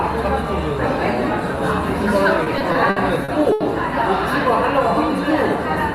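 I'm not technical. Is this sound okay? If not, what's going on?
No. There are repeated stalls (stutter) from 2.43 to 3.63 s: the sound catches six times, each for up to 80 ms. The audio data arrived late, so playback kept running dry and stretched the last bit of sound while it waited. Nothing is lost, but the sound drags and stutters.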